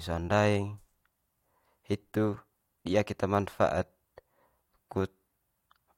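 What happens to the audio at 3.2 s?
Nothing goes wrong at 3.2 s; the speech carries on intact through that moment, with no dropout, click or distortion.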